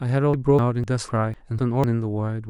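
Audio missing between chunks at 0.34, 0.59, 0.84, 1.09, 1.34, 1.59 and 1.84 s: the speech skips abruptly, likely because a few hundred milliseconds were dropped between processing chunks.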